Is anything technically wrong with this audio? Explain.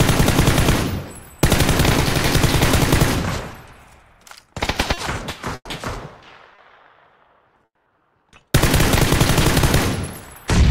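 Yes, the playback hiccups in a few places, and it's classic jitter-buffer trouble rather than anything in the source.

First, two short stalls from a late packet, at 4.93 to 4.99 s and 6.55 to 6.60 s. Each time a packet didn't show up on schedule, the buffer ran dry, and the receiver just held the last bit of sound, about 40 ms and then 30 ms, until the packet arrived. Nothing gets lost. You hear a brief smear, and everything after it lands a touch late.

Then two call audio freezes, at 5.55 to 5.67 s and 7.65 to 7.99 s, likely from packets getting held up in transit long enough to empty the buffer. The receiver kept the last sound going as it faded, filling about 100 ms and then 210 ms in all, each fill ending in a stretch of silence, about 50 ms and about 70 ms. When the packets catch up, the audio resumes right where it stopped. So it's a gap inserted into the audio, not a chunk cut out of it.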